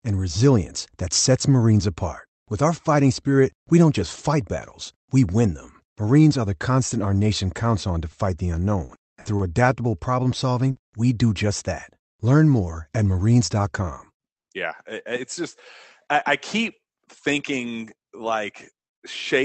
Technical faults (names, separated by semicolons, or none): short stall from a late packet; short concealed packet loss